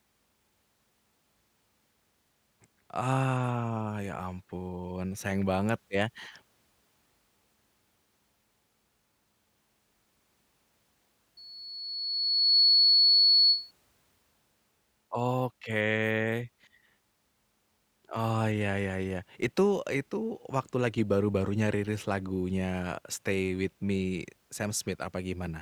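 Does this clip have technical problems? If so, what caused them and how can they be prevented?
Yes. Loudspeaker feedback squeal from 11.37 to 13.71 s: the microphone re-amplifies its own loudspeaker, and a 4.4 kHz tone swells over about a second to roughly 10 dB above the speech, a bright horizontal line on a spectrogram. Prevent it by lowering gain, moving the microphone away from the loudspeaker, or notching 4.4 kHz.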